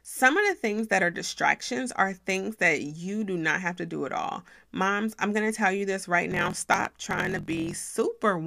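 Speech runs cleanly until just after "tell you this right", where from 6.30 to 7.95 s a coarse buzz at about 43.1 Hz appears and the talking hurries forward about 1.12 times faster while keeping its timbre. This is a block size mismatch (truncated). One stage hands over longer blocks than the next stage reads, so the tail of every block is discarded. The cut at each block boundary produces the buzz, and the lost samples make the speech run fast. The buzz rate fits a 1024-sample read.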